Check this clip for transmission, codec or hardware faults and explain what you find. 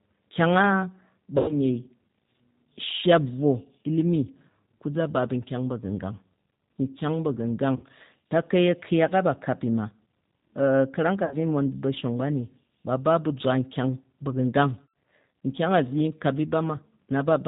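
Two faults are present: a low-bitrate speech codec throughout, and four short dropouts concealed by it.

The G.729 codec runs at 8 kbit/s for the whole clip. It rebuilds speech from a filter and pulses, passes nothing above 4 kHz, and sounds audibly rough and synthetic.

VoIP packet loss concealed by the speech codec occurs at 1.38–1.54 s, 7.76–7.84 s, 11.25–11.35 s and 14.84–14.88 s. The gaps are 100, 60, 60 and 100 ms. The decoder stretches the last sound into a fading buzzy tone or coloured noise, and it stays weak briefly afterwards.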